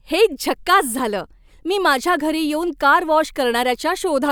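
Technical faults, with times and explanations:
No technical faults detected.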